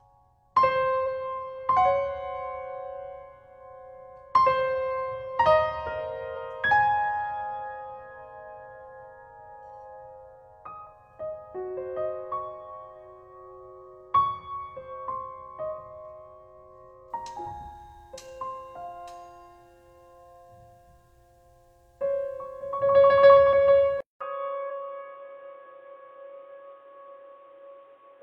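The audio has two technical faults. Damaged data in a compressed stream causes short chirps or blips at 1.03 s, 6.32 to 6.35 s, 10.82 to 10.87 s, 15.75 to 15.79 s and 24.66 to 24.72 s. Each lasts about 15 to 55 ms. At these points the decoder met corrupted frames. It lost sync and had to find the next valid frame header. From 24.0 s to the end, the sound turns dull and narrow. A 200 ms silence comes first. After it, nothing is left above 3.8 kHz. A new background noise appears, roughly 40 dB below the signal. The loudness stays about the same. This points to the input switched to a poorer device, likely a lower-quality microphone or a headset's call profile with a narrower band.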